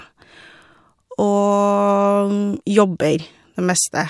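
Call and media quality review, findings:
No faults found in the speech signal; level, continuity and timing hold steady across the recording, with nothing in the audio that points to a failing capture, network or playback component.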